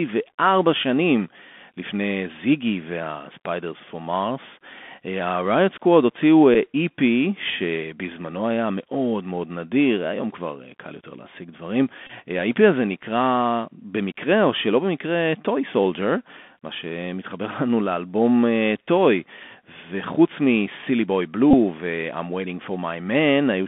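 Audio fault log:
throughout: Bluetooth CVSD headset codec. The speech is confined to roughly 200 Hz to 3.5 kHz, consistent with a 64 kbps CVSD link. Its one-bit slope tracking lags on loud, bright passages, leaving plainly audible gritty sibilants, overload distortion and a granular hiss beneath the speech.
6.54, 12.07 to 12.11, 21.51 to 21.55: Bluetooth headset packet repeated. Lost headset packets were replaced by replaying the previous one. The 6.54 event is a brief 7.5 ms loss of two packets. The later two last 26 and 22 ms, long enough to form a short buzz near 267 Hz, which points to runs of roughly six or seven 3.75 ms packets.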